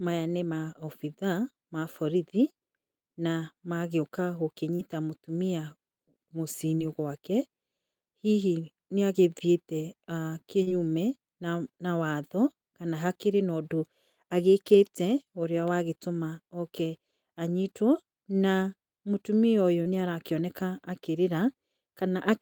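Short concealed packet loss occurs four times: at 4.75 to 4.82 s just after "na magagĩũka", at 6.75 to 6.82 s, at 10.63 to 10.69 s, and at 19.82 to 19.96 s after "anyitwo na mũtumia ũyũ". Each time about 40 ms of the speech stream arrived too late, and the receiver patched roughly 30 to 38 ms by extending the preceding sound before blending back, leaving a brief smeared wobble where the speech should be.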